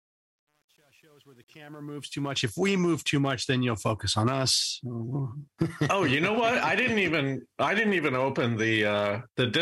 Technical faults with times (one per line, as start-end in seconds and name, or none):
0.00-2.46 truncation distortion on a fade